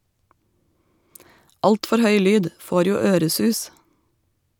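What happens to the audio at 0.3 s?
Nothing goes wrong at 0.3 s; the speech there is intact, with no audible fault.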